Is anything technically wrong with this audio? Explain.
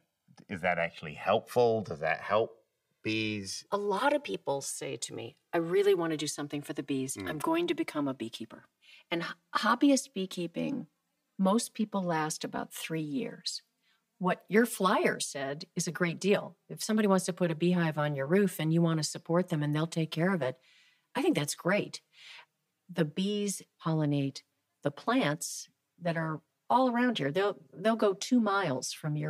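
Yes. Throughout the speech, the channels are drifting apart. Each channel was captured against its own clock, and the two disagree by roughly 200 parts per million, so the offset between them keeps growing until it reaches around 7 ms by the end. Summed to mono, this produces a slow, sweeping flange. On a spectrogram, comb notches slide downward and bunch closer together over time.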